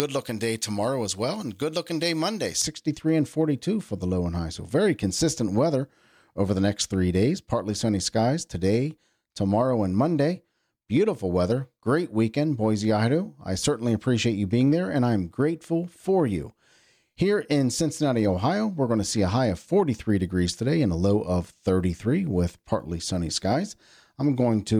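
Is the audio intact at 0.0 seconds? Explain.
No. From 0.0 to 2.62 s the pre-emphasis is left on: a J.17-style treble boost was never undone, lifting 10 kHz about 11 dB relative to 1 kHz. The speech sounds thin, bright and hissy on sibilants; a spectrogram shows unusually dense energy in the upper kHz bands.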